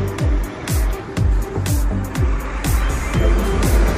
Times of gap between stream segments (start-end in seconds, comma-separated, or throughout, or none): none